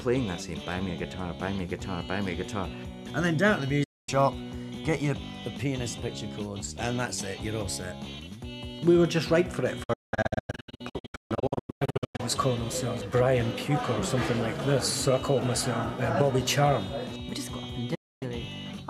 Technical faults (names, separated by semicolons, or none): digital broadcast dropout